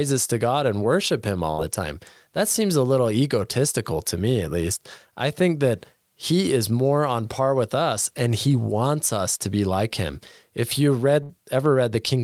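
Bursts of packet loss at 1.51–1.61 s and 11.23–11.32 s: a gap of about 64 ms was concealed by stretching the last sound into a fading buzz or hiss, then roughly 60 ms is skipped when the speech resumes.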